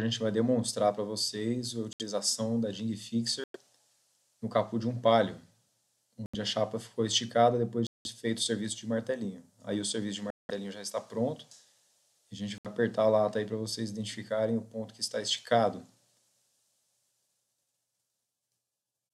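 The audio cuts to dead silence at 1.93, 3.44, 6.26, 7.87, 10.30 and 12.58 s, for 67 to 188 ms each, then resumes. This is likely a Bluetooth stall, where the buffer ran dry. Each gap appears as a flat waveform line and a full-height blank spectrogram column.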